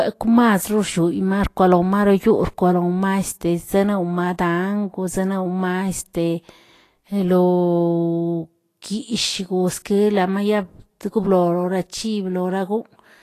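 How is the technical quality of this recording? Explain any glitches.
The recording carries audible lossy-coding damage from start to finish. Throughout the speech, the treble sounds hissy and grainy, with roughened tones and softened consonant attacks, and nothing is present above 14.2 kHz. This is likely Vorbis compression at a low bitrate, around 33 kbps. The encoder kept a smooth spectral envelope but quantised the high-frequency detail so coarsely that it turned into noise of similar energy.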